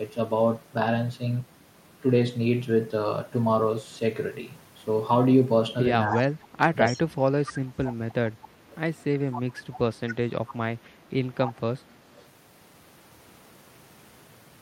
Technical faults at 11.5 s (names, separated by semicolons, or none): echo leak